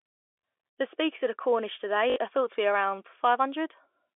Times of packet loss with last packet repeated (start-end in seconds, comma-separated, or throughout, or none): 2.10-2.16